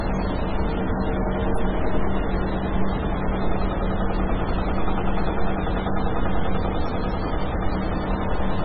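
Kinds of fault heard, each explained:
MP3 compression: throughout, the sound is heavily watery and swirly, with nothing above 10.3 kHz and quiet detail flickering in and out. The likely cause is an MP3 encoder short of bits, cutting the treble and dropping weak frequency lines, which fits roughly 16 kbps.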